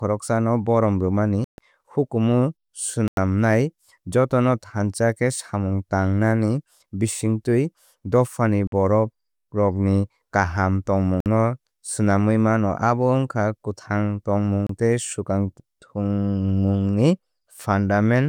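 The speech drops to dead silence five times: at 1.44 s for 138 ms, 3.08 s for 94 ms, 8.67 s for 49 ms, 11.20 s for 55 ms, and 14.67 s for 27 ms, before "tei swkang thangmungni". Each gap is a likely Bluetooth stall. The headphone buffer ran dry while delayed packets were resent.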